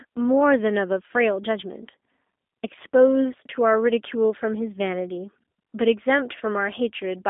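From start to finish the speech sounds thin, boxed-in and slightly rough, with a buzzy, synthetic edge that stays plainly audible. Nothing reaches above about 3.7 kHz, and the low end gives way below roughly 250 Hz. This is G.729 codec damage, most likely the G.729A variant at a rate consistent with 8 kbit/s. The codec discards the waveform and rebuilds each short frame from a vocal tract filter, a pitch predictor and a few pulses.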